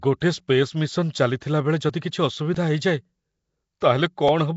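Throughout, the speech carries a rough, hissy halo and a smeared, underwater quality with nothing above 7.7 kHz. This is likely Nellymoser compression, whose noise-filled empty bands sound unlike plain low-pass muffling. At 3.80 s, pre-echo appears: a hiss of about 13 ms leads a sharp attack, as block-spread quantisation noise runs ahead rather than trailing like reverb.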